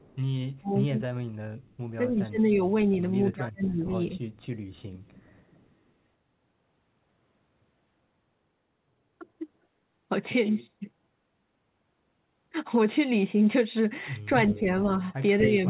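From 0.00 to 0.17 s a faint delayed copy of the speech, about 35 dB down, sits behind it: an echo leak, likely from a loudspeaker echo canceller letting residue through, lagging by 247 ms. It shows as a weak, offset repeat of the speech striations on the spectrogram. Between 0.58 and 4.22 s the speech is suppressed in double talk, likely because the canceller ducked the near talker while the far side spoke. About 1.5 s in total dips, by up to roughly 25 dB, as notches carved into the waveform envelope. Within that stretch, echo leaks return at 1.62 to 1.77 s (about 40 dB down) and 2.92 to 2.96 s (about 25 dB down), also 247 ms late.

A longer echo leak, at a 268 ms delay and about 30 dB down, runs from 4.32 to 5.72 s. A brief suppression dip of roughly 5 dB follows at 9.19 to 9.23 s. At 14.48 to 14.59 s a louder echo leak appears, only about 15 dB below the speech. From 14.51 s to the end the speech is held down by roughly 10 dB.

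Throughout, the G.711 call path leaves the spectrogram empty above 4 kHz.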